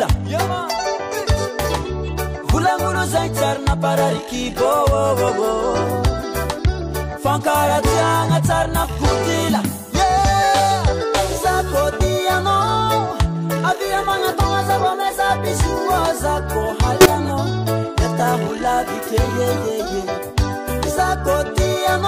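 At 5.26 to 5.30 s, 11.99 to 12.02 s and 17.01 to 17.06 s the audio jumps forward, a case of compressed frames skipped. Whole coded frames were never decoded, either missing from the stream or rejected as damaged, so playback leaps ahead by a few tens of milliseconds, the middle gap being the longest.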